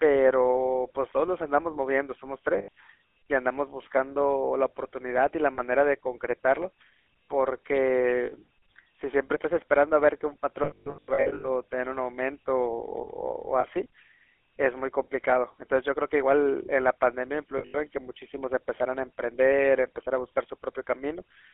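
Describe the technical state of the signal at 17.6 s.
Lost GSM frames run from 17.58 to 17.77 s. About 140 ms of bad frames are scattered over 160 ms, with the longest unbroken run near 70 ms. Each gap is filled by repeating the last good frame's settings. Unlike a dropout's hard silence, this gives a held, rough, metallic ring.

Underneath, the GSM full-rate codec is plainly audible, which fits 13 kbps full rate. The sound is confined to roughly 300 Hz to 3.4 kHz, and the pulse-driven excitation adds a buzzy, gravelly roughness. That grain sets it apart from the swirly smearing of a low-bitrate transform codec.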